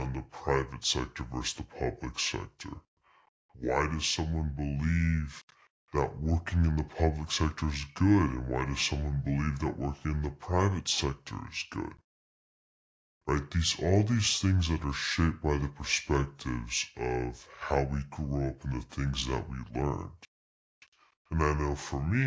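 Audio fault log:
Throughout: wrong sample rate. The speech runs at two-thirds speed and about 7 semitones low, which fits 24 kHz audio played back at 16 kHz.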